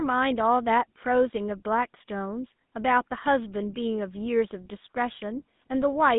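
GSM full-rate codec damage runs throughout the speech, from start to finish. The voice is rebuilt from a vocal-tract model driven by sparse, regularly spaced pulses, which fits a 13 kbps coder, leaving a plainly audible buzzy, gravelly roughness, a narrow 150 Hz to 3.6 kHz line band, and nothing above 3.8 kHz.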